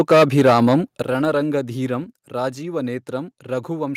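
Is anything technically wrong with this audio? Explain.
Yes. From 0.0 to 0.75 s the speech shows microphone overload. Peaks run about 10 dB past the converter's ceiling and roughly a tenth of samples are flattened at the converter's limit, giving loud syllables a harsh, crackling edge. The likely cause is input gain set too high.

The microphone volume then steps down twice: about 9 dB at 1.02 s and about 4 dB at 2.04 s. Voice and background drop together abruptly, most likely because the call software cut device input gain after detecting the clipping.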